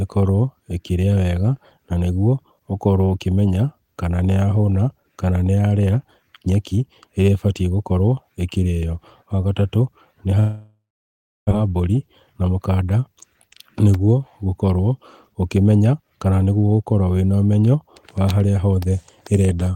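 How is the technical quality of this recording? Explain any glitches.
The recording has two network-related glitches, close together in the second half.

From 10.39 to 11.53 s there is a long network dropout. The sound smears into a fading buzz, then about 660 ms of near-silence, and roughly a second of audio never returns. The likely cause is lost packets. Unlike a brief packet-loss gap, the concealment gives up and the sound resumes further on.

From 12.26 to 12.57 s there is a jitter buffer speed-up. Having built up extra delay, the receiver trims short pitch-period slices, about 50 ms in total, so the audio plays at about 116% speed while the pitch stays the same. This keeps it distinct from a resampling glitch, which would raise the pitch too.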